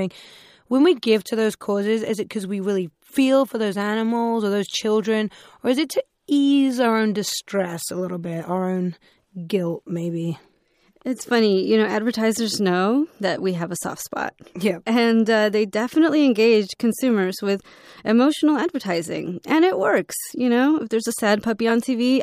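At 21.69 s, just after "there's a", a brief chirp-like blip cuts through the speech, peaking fairly loud, around -15 dBFS. This is a corrupt frame decoded: flipped bits in a single compressed frame were played anyway, misplacing energy across frequencies for that frame's length.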